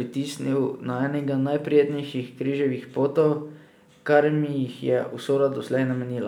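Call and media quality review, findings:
No audible faults found in this speech recording.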